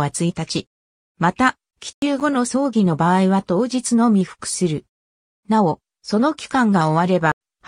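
Corrupt frame muted at 1.91 s (0.12 s) and 7.32 s (0.06 s): rejected frames become abrupt silence, flat waveform gaps and blank spectrogram columns.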